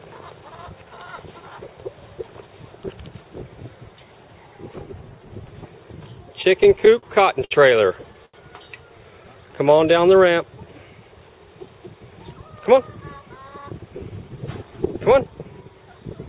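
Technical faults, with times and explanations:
6.42–7.05 s, repeated stalls (stutter): the jitter buffer ran dry five times, longest gap 42 ms, so held-over sound fills about 14% of the stretch and it stutters.
7.45 s and 8.26 s, short stall from a late packet: each late packet left the buffer empty, so the last sound was stretched 60 ms, then 79 ms, before resuming.
8.98–10.66 s, jitter buffer slow-down: repeated pitch periods added 145 ms to rebuild the reserve, so the audio runs at 92% speed, drawn out but unchanged in pitch.
12.57–15.28 s, jitter buffer speed-up: trimming short pitch-period slices removed roughly a fifth of a second of excess delay, so the audio hurries along at 107% at the same pitch.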